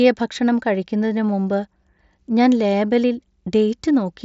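No faults are audible in this speech clip. It comes through a Bluetooth mSBC headset codec working as intended, so the audio is limited to wideband, with nothing above about 7.7 kHz, and loud sounds carry a light graininess.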